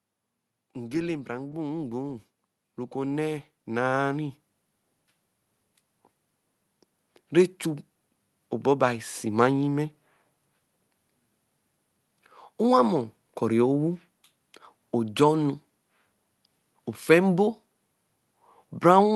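Automatic gain rising: the gain control judged the input too quiet and ramped its gain up by about 12 dB from 1.25 to 4.43 s, so the speech and the background noise swell together over those three seconds, heard through a call codec whose top end stops near 12 kHz.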